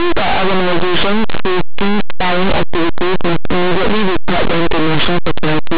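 From the first moment to the end, this speech is hit by linear audio read as companded: plain 8-bit linear samples are being pushed through a mu-law expander as though they were G.711 codes. Small values just to one side of zero get blown up to near the biggest outputs, while their mirror images stay tiny, so the whole thing comes across as very loud, harsh distortion.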